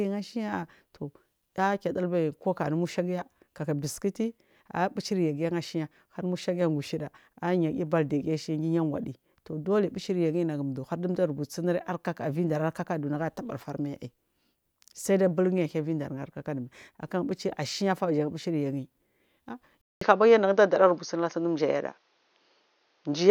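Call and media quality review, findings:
Speech goes dull and narrow from 19.81 s to the end at 23.31 s. Nothing above 6.6 kHz, a 200 ms silence at the change, a small level shift and faint new background noise. Likely input switched to a poorer device with a narrower band.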